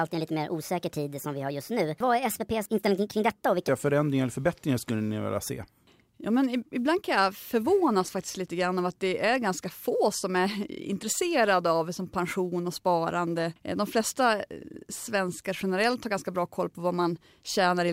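A section at the wrong speed runs from the start to 3.69 s: the speech plays about 1.39 times faster than it was recorded, so pitch and pace rise together, roughly five semitones higher and hurried. The likely cause is this opening stretch being clocked against the wrong rate during editing or playback, so it was read out too quickly. At 3.69 s the speech drops abruptly to its natural pitch and tempo.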